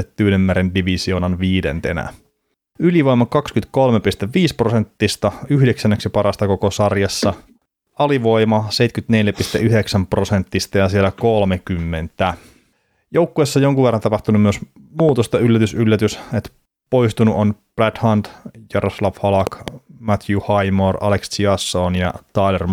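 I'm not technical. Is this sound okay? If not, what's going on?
No. There is a loud pop at about 15.0 seconds and another at about 19.5 seconds, and each one is really two sharp clicks in quick succession, the first pair noticeably louder than the second. The speech carries on underneath without a break. This is likely a sudden electrical jolt, such as a plug being nudged, a switch, or a static discharge, that got added to the signal and came out of the speakers as a thump.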